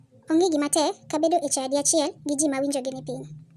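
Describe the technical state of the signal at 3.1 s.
At 3.1 s the speech runs fast and high. The wrong sample rate affects the whole clip. Playback is about 1.45 times too fast, with pitch raised roughly 6.5 semitones. That fits 22 kHz audio played at 32 kHz without conversion.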